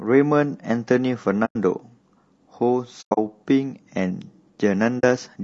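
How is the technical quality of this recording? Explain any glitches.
The technical quality is compromised by two problems: coarse codec coloration across the whole speech clip, and three brief dropouts.

Throughout, the voice sounds rough and grainy, with noise filling the gaps between harmonics and a thin, somewhat synthetic top band. This is likely low-delay AAC compression (AAC-ELD), whose short frames resolve pitch harmonics poorly. The damage is plainly audible and fits a low bitrate around 32 kbps.

AAC frame loss with muting occurs at 1.45–1.56 s, 3.01–3.18 s and 4.99–5.04 s. The decoder zeroed the missing frames, and the overlapping windows fade the sound out and back in, leaving soft-edged holes. The first gap is about 100 ms long. The second is about 140 ms of loss spread over 160 ms, with the longest continuous stretch around a tenth of a second. The third is about 40 ms.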